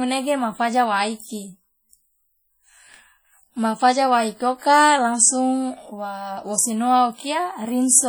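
From start to finish the speech sounds ringing and washy, with a hiss that swells and falls along with the voice and smears each syllable over tens of milliseconds. This is heavy damage that is likely from WMA compression at a rate that fits about 32 kbps. The transform coder spreads its quantisation noise across long blocks and drops the weakest spectral lines entirely, even though the band still reaches about 20.1 kHz.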